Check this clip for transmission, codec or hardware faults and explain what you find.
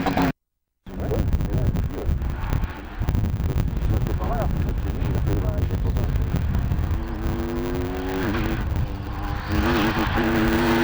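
One fault is present throughout: a block size mismatch (truncated). Each written block, which fits a 512-sample size, loses its tail before the next stage reads it. This produces a 100 Hz buzz and plays the audio 1.16 times fast. On a waveform, jumps repeat every 10 ms. A spectrogram shows matching vertical striations.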